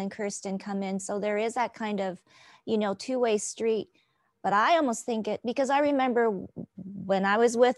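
No technical faults are audible.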